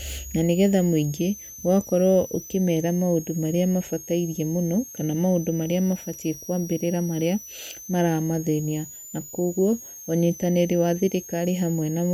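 From start to finish, a switching supply whistle sits roughly 20 dB below the speech, wandering between about 5.8 and 7.0 kHz. A power converter is cycling at an audible rate, and its wandering pitch separates it from fixed-frequency hum or whine.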